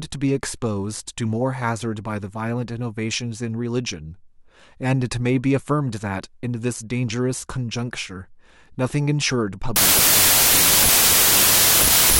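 From 9.76 s to the end, a wrong sample width: loud noise buries the speech, slowed to 0.75× and pitched down, consistent with 32-bit samples read as packed 24-bit.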